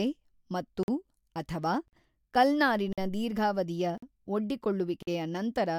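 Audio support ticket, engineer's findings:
Chunked delivery leaving silence at each chunk join: gap between chunks. Stream segmented into 1.0 s chunks; playback or decode path inserting about 48 ms of dead air before each next chunk starts, probably codec padding or late chunk start in the player. No speech content lost, only pushed later. Symptom: hard-edged dropouts at 0.83–0.88, 1.88–1.93, 2.93–2.98, 3.98–4.02 and 5.02–5.07 s, evenly spaced, chopping the speech on a steady one-second rhythm.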